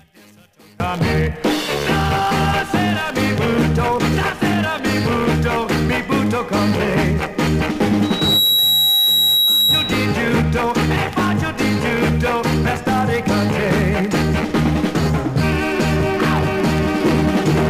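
One channel inverted, likely, explains the opening from 0.0 to 0.8 s: the audio drops by about 30 dB. With one stereo channel's polarity reversed, everything the two channels share cancels when they are folded to mono. Only their small difference remains, which leaves a faint residue instead of the full sound. A loudspeaker feedback squeal runs from 8.03 to 10.11 s. A steady tone at 3.9 kHz rises out of the audio in under half a second and settles somewhat louder than the programme itself, holding there as a squeal until it stops. It comes from a microphone picking up the loudspeaker it feeds. At that one frequency the loop gain goes above unity, so each trip around the loop reinforces the tone until it reaches a ceiling.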